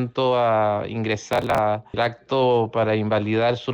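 The clip is a short piece of audio with processor overload crackle from 1.33 to 1.58 s. The processor falls behind and misses buffer deadlines many times in a row. Each miss skips a chunk of around 10 ms, leaving a hard-edged gap. These rapid gaps form a gritty burst that stops when the load eases.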